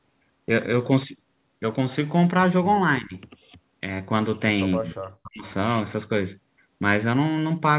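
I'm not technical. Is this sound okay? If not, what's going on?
No. Speech suppressed in double talk at 3.01 to 3.25 s, 4.78 to 4.99 s and 5.21 to 5.45 s: the voice dips, then nearly cuts out, likely because the call's echo canceller muted it while the other side spoke.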